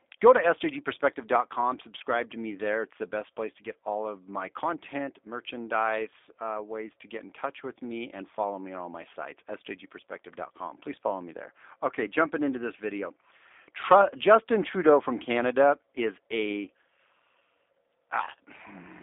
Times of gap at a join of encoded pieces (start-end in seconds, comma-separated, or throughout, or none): none